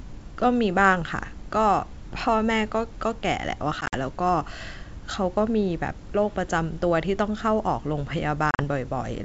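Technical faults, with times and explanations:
3.81 to 3.96 s, packet loss on an ADPCM call: about 70 ms of the wideband speech drops to hard-edged silence, scattered over 120 ms with the longest gap 50 ms, which suggests roughly seven lost packets. The decoder's adaptive predictor and step size lose track of the sender's, so the speech comes back slightly distorted, then settles within tens of milliseconds.
8.51 to 8.61 s, packet loss on an ADPCM call: about 70 ms is again replaced by silence, this time within 80 ms with the longest gap 40 ms, again pointing to about seven lost packets. The same predictor and step-size mismatch leaves the speech slightly distorted as it resumes, then a brief recovery.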